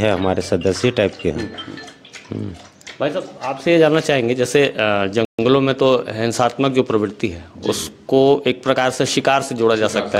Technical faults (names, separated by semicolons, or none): Bluetooth stall